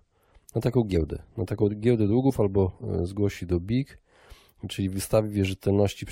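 At 0.94 s, after "na taką", and at 2.29 s, after "na taką giełdę", compressed frames are skipped: about one 23.2 ms frame drops out, so the audio jumps ahead by about 20 ms.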